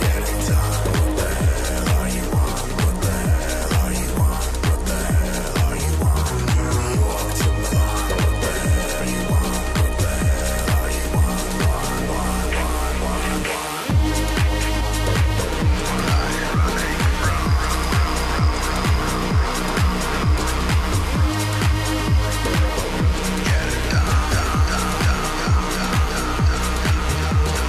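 At 7.71, 8.99, 14.79 and 24.11 s, compressed frames are skipped: the audio jumps ahead by a fraction of a second, in steps that fit 23.2 ms frames.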